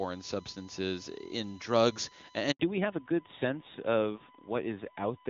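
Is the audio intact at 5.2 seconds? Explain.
No. At 5.2 s the speech sits inside a fallback to narrowband that runs from 2.60 s to the end: the call has dropped from HD Voice to an older narrowband codec, so nothing survives above 4 kHz. The dull, rough quality, which fits a low-rate coder around 7.4 kbit/s, sets it apart from a plain low-pass filter. A USB whine also runs throughout, a fixed 1 kHz tone roughly 25 dB below the speech from the USB bus's 1 ms frame timing leaking into the audio. Its kilohertz pitch, rather than the low buzz of mains, is what marks it out.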